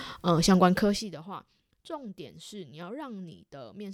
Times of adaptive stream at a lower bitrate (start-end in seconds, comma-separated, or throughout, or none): none